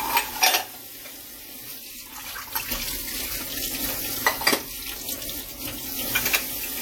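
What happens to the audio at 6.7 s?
At 6.7 s the sound carries the same ringing, washy smear and signal-following hiss heard throughout, likely WMA compression at roughly 48 kbps, with long transform blocks spreading quantisation noise.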